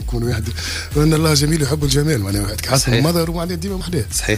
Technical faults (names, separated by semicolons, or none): dropped buffer (overrun)